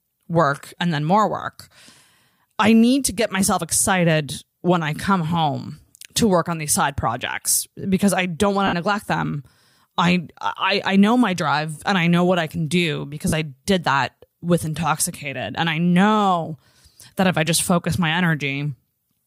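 A speech clip with two brief noisy smears: at 8.67 to 8.73 s, after "because I don't want" and before "neglect them I I", and at 13.28 to 13.33 s, after "what I can do". These are lost LE Audio frames, gaps of 60 ms and 45 ms that fit roughly eight and six lost frames. The LC3 decoder filled each gap by repeating the last spectrum with randomised signs.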